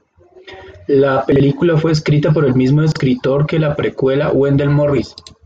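Chunks out of order appear at 1.32 to 1.40 s, just before "fue escrita por el", and again at 2.92 to 3.00 s, between "escrita por el mismo" and "que la precuela". Each time, a 40 ms chunk of speech arrived one chunk late and plays after the one that should follow it. Nothing goes missing, but the swapped order and the three hard joins around each pair produce a brief jumbled stutter.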